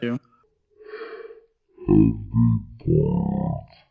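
A speech clip with a wrong sample rate from 0.44 s to the end: it runs at one-third speed and 19 semitones low, which fits 48 kHz audio played at 16 kHz. Unlike a pitch shift or a time-stretch, speed and pitch drop together.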